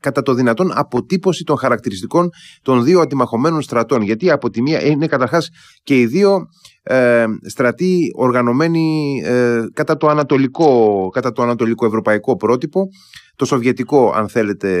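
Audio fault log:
3.95–5.28 s and 9.92–11.20 s, Bluetooth SBC bit pool drop: the speech turns dull and loses its treble, and a gritty, grainy noise sits under it until clarity returns. The first dip follows "χαρακτηριστικών των δύο αντιμαχωμένων" and ends before "και οι". The second ends just before "το ανατολικό ευρωπαϊκό". Both times a congested wireless link forced the encoder to spend far fewer bits. The upper sub-bands were starved and the rest were coarsely quantised, which fits a bit pool falling from 31 to 8, around 66 kbps.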